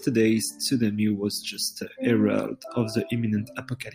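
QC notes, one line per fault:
No faults were heard in the clip. Nothing in the audio calls for a QC entry.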